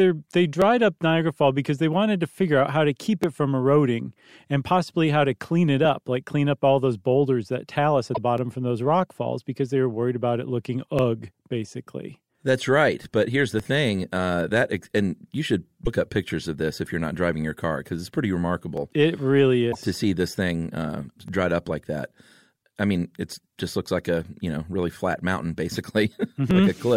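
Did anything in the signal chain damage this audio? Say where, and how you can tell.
Yes. At the buffer stage, clicks recur every 2.61 s from 0.62 to 26.51 s, about ten in all, each a thin vertical waveform step. These are likely clock drift buffer slips, with clocks around 500 ppm apart dropping or repeating roughly 70 samples.

At the codec stage, short glitches occur at 8.14–8.18, 15.85–15.88 and 19.71–19.76 s, seen as smeared spectrogram blotches. The likely cause is a broken MP3 bit reservoir after missing 26.1 ms frames.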